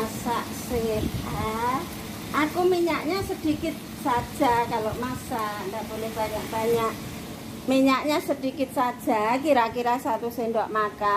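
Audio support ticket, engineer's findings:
No audible faults found on review; signal level, continuity and timing hold steady across the whole file, with nothing attributable to capture, transport or playback components.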